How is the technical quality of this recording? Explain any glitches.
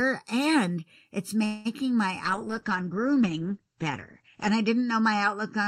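The quality is poor, with three faults in the speech.

Throughout, channel delay causes comb filtering. One channel lags by roughly 0.7 ms, and summing to mono cuts evenly spaced notches from about 700 Hz. The result sounds hollow, with fixed dark stripes on a spectrogram.

From 1.45 to 1.67 s there is a call audio freeze. A buzzy, fading extension of the last sound fills about 0.2 s, likely from delayed packets draining the jitter buffer. The waveform shows a smeared, decaying stretch, and the speech then resumes with nothing lost.

From 2.26 s to the end, a call bitrate drop from 64 to 11 kbps makes the speech rough and muffled. The spectrogram's upper content vanishes abruptly above 8 kHz.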